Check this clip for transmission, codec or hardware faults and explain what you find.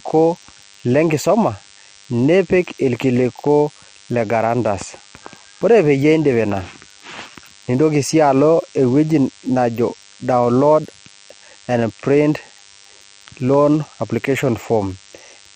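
One fault runs through the whole speech clip: DECT cordless phone buzz. A DECT handset or base station nearby transmits a short radio burst every 10 ms. Some stage in the audio circuit rectifies that radio energy. The result is a pulse train at 100 Hz in the audio. Its sharp edges add many harmonics. It is heard as a thin, steady buzz. It sits about 30 dB below the speech and persists during pauses.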